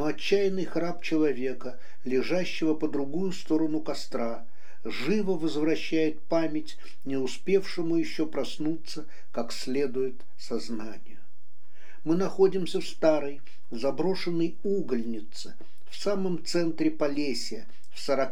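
A DC offset runs through the whole clip: a constant shift of about -26 dBFS holds the waveform off its zero line. The shift itself is inaudible, but it eats into the available headroom and leaves steady energy at the very bottom of the spectrum.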